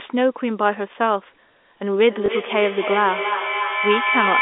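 From 2.05 s to the end, the speech comes back on itself at an interval of about a third of a second, each return thinner and more ringing than the last, with the loudest repeats reaching about 2 dB below the speech itself, so they stack up rather than fade. This is feedback echo between two devices: one device plays out what the other's microphone sent, that microphone picks it up again, and neither echo canceller removes sound played by the other device.

Between 2.26 and 2.28 s, inside the echoing stretch, there is a small blip where 20 ms of audio is replaced. This is packet loss with the last packet repeated. The receiver filled the gap by replaying the previous chunk, which fits a single 20 ms packet. Throughout, the sound sits in the narrow telephone band of G.711, roughly 250 Hz to 3.6 kHz.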